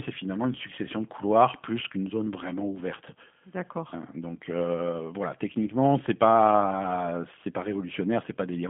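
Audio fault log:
throughout, G.729 codec: the speech sits inside a telephone band of 200 Hz to 3.4 kHz, with nothing present above 3.5 kHz, and carries a plainly audible rough, synthetic edge. The coder does not send the waveform itself. It resynthesises each 10 ms frame from a spectral envelope filter, a pitch predictor and a sparse set of excitation pulses, so fine detail is replaced by a coarse model. The sound fits the 8 kbit/s G.729A variant.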